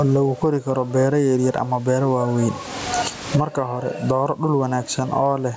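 Gain pumping runs through the whole clip, most likely from the microphone gain sitting far too high, with a fast limiter or compressor hauling it back down each time the speech gets loud. The gain swings by around 30 dB, and the room noise sits about 36 dB below the speech. The speech sounds squashed and flattened in level. The call's microphone processing leaves nothing above 8 kHz.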